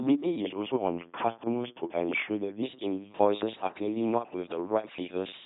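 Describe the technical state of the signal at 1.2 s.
At 1.2 s the speech buzzes like a mechanical robot voice with nothing above 3.9 kHz: the LPC-10 vocoder, whose pulse-or-noise excitation through a short all-pole filter fits a 2.4 kbit/s rate. The same moment sits inside a drift correction step from 0.40 to 2.62 s, where speed drops 6% and pitch falls 107 cents, about a semitone, likely from clock-matching software slowing playback to rebalance its buffer.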